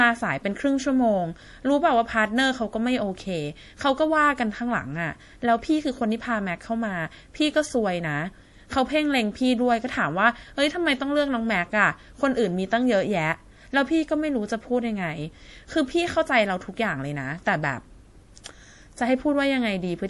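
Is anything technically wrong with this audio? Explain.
Yes. MP3 compression runs through the whole speech clip, and its damage is plainly audible. The likely cause is an MP3 encode starved of bits, which fits a low bitrate of around 48 kbps. With too few bits, the encoder removes everything above 11.5 kHz and drops the weaker frequency components, which flicker in and out from frame to frame. The result is dull, watery speech with a swirly texture and metallic chirping on s sounds.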